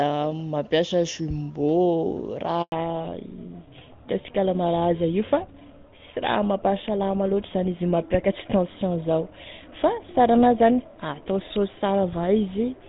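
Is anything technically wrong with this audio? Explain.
Yes. There are two faults, and they are linked.

A handover gap runs from 2.62 to 2.72 s, just after "mampiasa jumbo". The call switched networks, and no speech frames arrived during the swap. The sound fades out quickly and stays silent for 100 ms. Anything said then is lost.

A fallback to narrowband starts at 2.72 s and lasts to the end. Before that, the AMR wideband (HD Voice) codec sounds clear, which fits a high rate like 23.85 kbit/s. After the switch, nothing remains above 4 kHz. The sound turns duller and rougher, consistent with a GSM full-rate codec.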